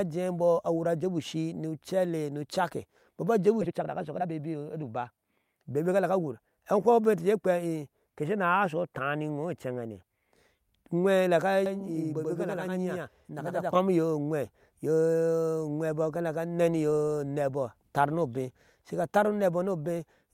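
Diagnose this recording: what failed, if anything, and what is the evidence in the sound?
At 3.61 s the speech jumps abruptly forward with no gap, and roughly a second of talk is simply gone. This is a skip ahead in the network jitter buffer: queued audio was discarded to cut the built-up delay, and the two sides were spliced directly together.

From 3.64 to 6.65 s the speech runs hurried, about 119% speed, yet the pitch stays put. This is a jitter buffer speed-up: the receiver repeatedly trimmed pitch-period-sized slices, around half a second in total, to drain the excess buffering.

Between 11.66 and 13.75 s every sound is doubled by a same-level slap about 93 ms behind it. This is channel delay (doubling) at the driver or buffer stage: one channel lagged by a delay that fits a 4096-sample buffer, and the mono fold-down summed both copies.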